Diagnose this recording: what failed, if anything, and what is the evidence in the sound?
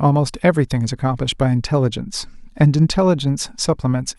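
Nothing failed in this recording.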